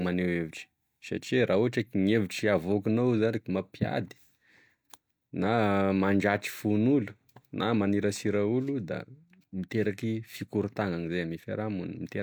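No technical faults can be heard anywhere in the speech recording.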